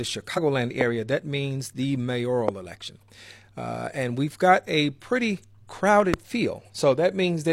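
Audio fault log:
0.33–0.39 s, compressed frames skipped: a brief smeared blip as the speech jumps forward by roughly a tenth of a second. About two whole frames were lost, which fits frames near 46 ms long, and overlap between neighbouring frames blurs the join instead of clicking.
0.81–0.83 s, 2.48–2.51 s, 6.14–6.16 s, loud pop: a single sharp pop each time, roughly 20 dB above the speech, which carries on underneath. The first comes just before "that means the", and the second just after it, ahead of "election uh and we've". Each is likely a sudden voltage pulse, such as a plug, switch or static discharge, briefly shaped by the circuitry that follows.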